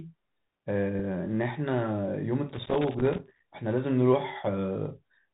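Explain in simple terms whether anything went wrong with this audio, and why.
Something did go wrong, in two ways. The whole recording passed through a Bluetooth CVSD headset codec. This narrow phone-style link drops everything above 4 kHz, so the speech sounds muffled and boxy. A grainy hiss sits underneath, and s sounds come out scratchy.

From 2.49 to 3.42 s there is loose connector crackle. A worn or dirty contact kept touching and letting go. That chopped the signal on and off very quickly. You hear it as a rough burst of crackling and scratching.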